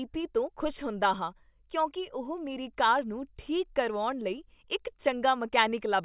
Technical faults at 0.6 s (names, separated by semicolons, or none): none